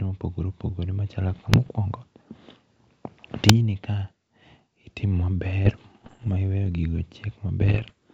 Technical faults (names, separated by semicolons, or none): bit errors on an ADPCM link